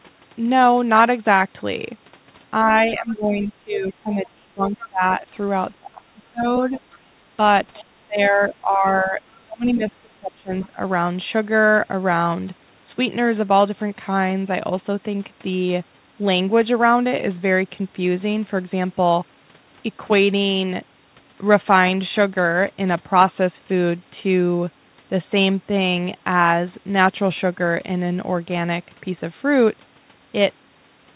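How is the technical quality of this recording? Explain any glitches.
The recording has two recurring echo-canceller problems in its first eleven seconds, heard over a telephone-band call path with nothing above 4 kHz, as a 64 kbps G.711 codec would produce.

Speech suppressed in double talk occurs at 2.64–5.26 s, 5.79–7.22 s and 7.81–10.78 s. When both ends talked at once, the canceller likely couldn't tell the near talker from loudspeaker echo and attenuated everything. The speech dips by about 20 to 25 dB.

The other side's voice leaks through at 3.73–4.88 s, 6.54–6.98 s, 7.79–7.83 s and 10.62–10.66 s. Loudspeaker echo reached the microphone and likely survived the canceller. It is a faint second voice well below the talker, longest in the first stretch and only brief scraps later.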